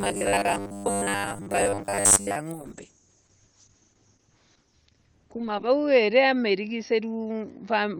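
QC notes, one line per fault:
0.01–2.36 s, robotic sound from repeated short buffers: a rigid 100 Hz metallic buzz, likely from most of the audio being 10 ms repeats filling gaps.
2.52 s to the end, call bitrate drop: from 40 to 8 kbps, top end cut from 20 kHz to 6 kHz, so it turns muffled and rough, bottoming out for 3.16 s.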